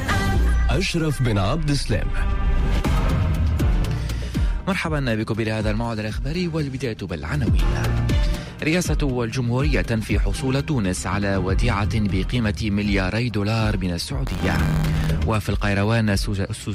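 From 14.26 to 15.06 s, buffer tearing: writer and reader cross inside each period, splicing in a sliver of audio about 30 ms stale, producing a rattling 93.8 Hz buzz that fits a 512-sample buffer.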